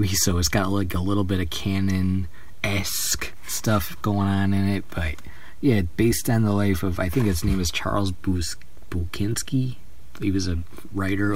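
A DC offset runs through the entire clip, shifting the waveform off zero by a constant of about -29 dBFS. It cannot be heard as a tone, but it eats into headroom and registers as steady energy at 0 Hz, the very bottom of the spectrum.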